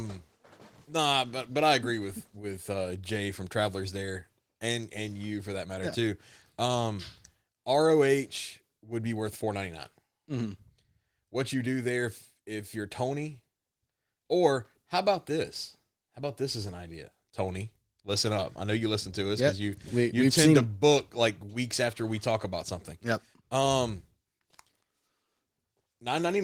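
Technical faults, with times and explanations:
No technical faults can be heard in this speech.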